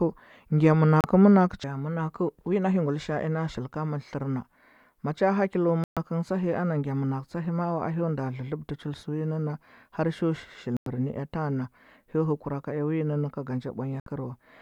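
Brief silent holes cut into the speech at 1.01 to 1.04, 5.84 to 5.97, 10.77 to 10.87 and 14.00 to 14.07 s. This is digital broadcast dropout: the receiver muted while it discarded damaged frames, with each gap matching whole frames of about 32 ms.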